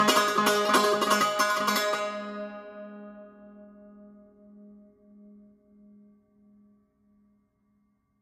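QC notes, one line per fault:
Throughout: low-bitrate audio saved at a high bitrate; the music stops at 16.5 kHz, likely from a low-rate earlier encode whose losses the high-rate MP3 carries.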